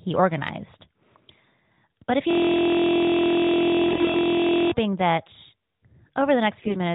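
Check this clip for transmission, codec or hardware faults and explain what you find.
Two faults turn up, and they overlap near the end of the first one. The whole clip is speech carried over AMR narrowband, so nothing reaches above 4 kHz.

System hang loop, 2.31 to 4.71 s: the speech stops and a single 23.2 ms slice of audio repeats exactly, about a hundred times. The machine or its driver froze while the audio hardware kept replaying the same ring buffer, and the loop length fits a 1024-sample buffer. Because the piece is so short, it comes across as a steady buzz at about 43 Hz rather than a stutter.

AMR bit errors, 3.88 to 4.16 s: inside that looping stretch the sound also turns rough and scratchy, with a gargly edge, while keeping roughly the same pitch and level. On a weak link some of the less protected bits in the AMR frames were flipped, at a rate of a few percent, so the decoder put its excitation pulses in the wrong places and got the gain and spectral details wrong. 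The errors hit ten 20 ms frames within that span.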